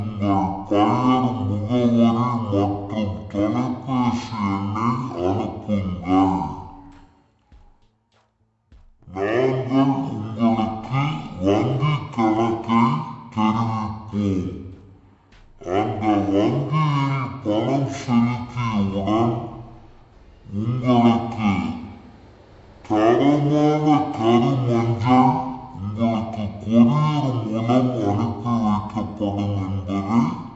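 From the first moment to the last, the whole clip has a wrong sample rate problem. Everything runs at half speed and sits a full octave low, 12 semitones down, because the samples are going out at a slower clock than the one they were captured with and nobody converted them. The halving fits 48 kHz material played back at 24 kHz. The result sounds sluggish, dragged out and murky, with every detail stretched to twice its length.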